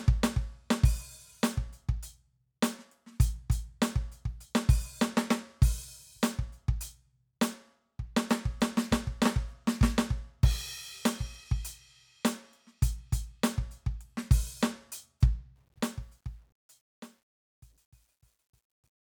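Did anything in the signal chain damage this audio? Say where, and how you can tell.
Yes: truncation distortion on the fade-out from 15.56 to 19.11 s, turning gritty after 16.63 s, fits an undithered 10-bit gain stage squaring the fading music into steps.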